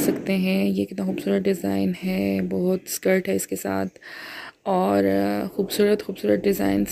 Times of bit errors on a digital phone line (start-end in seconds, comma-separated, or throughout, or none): none